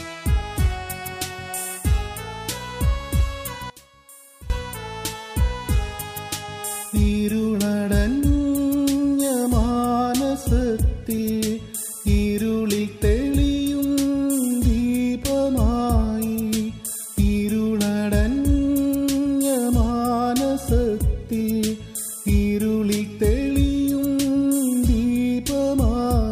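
From 3.7 to 4.5 s the sound collapses to a faint residue about 19 dB down. The likely cause is one channel inverted: one side's polarity is reversed, so material shared by both channels cancels in the mono sum, leaving only their difference.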